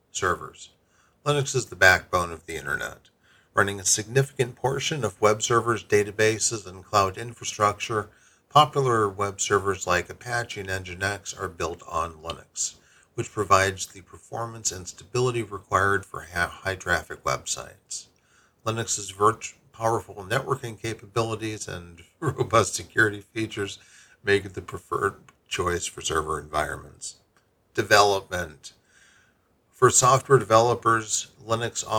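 From 28.27 to 30.03 s, regular ticks every 0.25 s mark periodic USB or driver dropouts: brief gaps of under a millisecond filled with silence.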